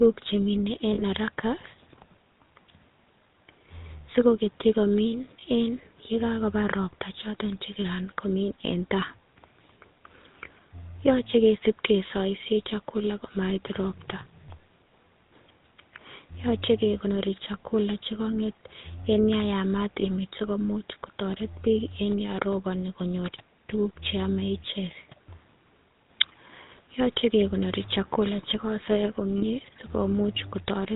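From start to finish the speech has a buzzy, gravelly roughness, and nothing above 4 kHz comes through, so it sounds dull and rasping. This is the GSM full-rate codec, with damage that is plainly audible and consistent with its 13 kbps rate. The coder models the vocal tract and excites it with a regularly spaced pulse train that keeps only every third sample, which leaves that coarse grain on every syllable.

Four brief metallic rings interrupt the sound, each a short held smear. The first, from 0.94 to 1.03 s, comes just after "che mine". The second, from 5.40 to 5.43 s, falls between "sikoketyi komin" and "en ye". The others come from 20.00 to 20.04 s and from 29.38 to 29.43 s. These are lost GSM frames. The decoder filled each gap by repeating the last good frame's settings. The 40 ms gaps fit two lost 20 ms frames, and the 20 ms gaps fit one.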